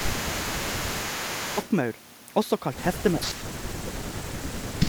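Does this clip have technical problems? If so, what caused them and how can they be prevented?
Yes. From 0.0 to 1.69 s there is an echo leak. A delayed copy of the speech trails the original by 431 ms, about 10 dB quieter. The likely cause is a loudspeaker whose echo canceller let part of the sound back. Using a headset on that side prevents it.

Speech suppressed in double talk occurs at 0.65–1.35 s, 3.15–3.32 s and 3.6–4.88 s. The voice dips by about 10, 20 and 30 dB in turn. Both sides likely spoke at once, so the echo canceller turned the talker down with the echo. Headsets or a better full-duplex echo canceller prevent it.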